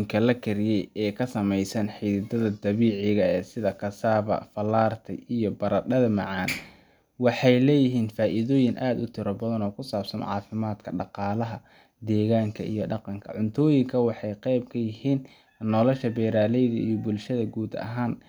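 Nothing goes wrong anywhere in this speech recording, so there's no technical fault to point to.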